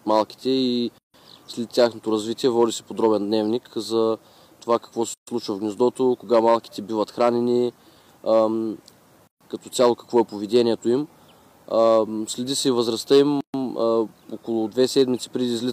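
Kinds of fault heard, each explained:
Gap at a join of encoded pieces: Separately encoded pieces were joined with their encoder delay left in. Silences of about 130 to 160 ms cut the sound at 0.98, 5.14, 9.27 and 13.41 s.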